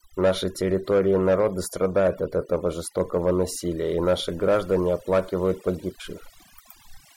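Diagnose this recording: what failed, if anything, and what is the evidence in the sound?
Overdone noise removal, at the processing stage, runs through the whole speech clip. The background drops, with twinkling specks where residual noise pokes through. The suppressor was set far too hard. It drives individual frequency bands down or out whenever they sit close to its noise estimate. Quiet voice components fall into that range and vanish with the noise, leaving isolated bands that flicker on and off.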